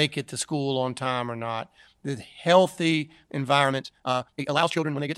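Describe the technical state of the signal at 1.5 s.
At 1.5 s the speech signal is intact, with no audible dropout, distortion, or other technical fault at that moment.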